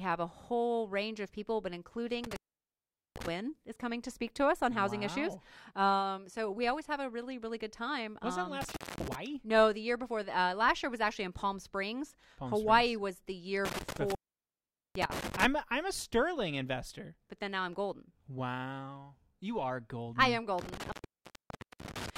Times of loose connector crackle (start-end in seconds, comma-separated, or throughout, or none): none